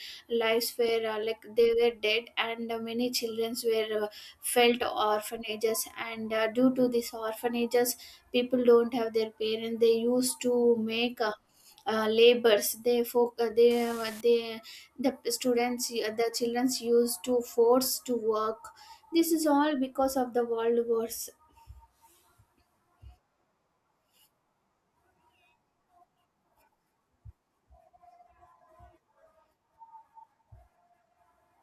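An unreliable data bit appears from 13.71 to 14.21 s: one marginal line in the digital path flips its bit in a random share of samples, so each error adds a spike of identical size, about -34 dBFS, heard as a half-second burst of crackling fizz over the speech.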